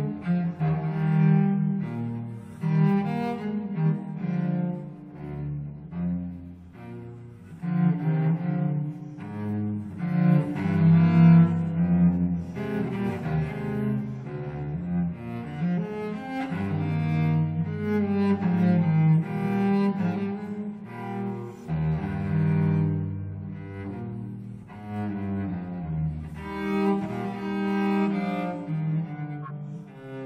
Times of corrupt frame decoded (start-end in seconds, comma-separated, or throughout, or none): 29.43-29.51